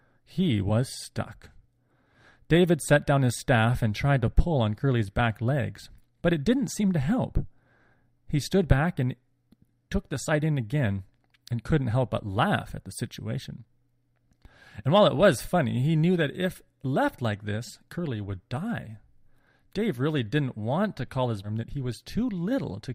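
Speech, with one fault. At 21.43 to 21.49 s the audio jumps abruptly ahead with a brief blip. This is a stream segment skipped, likely from a segment that failed to load.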